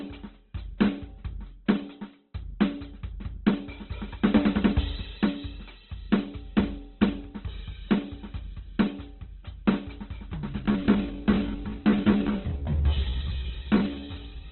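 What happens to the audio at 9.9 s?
At 9.9 s the music is still band-limited with nothing above about 4.2 kHz, and tones sound grainy and rough throughout. That's likely heavy Opus compression at a very low bitrate.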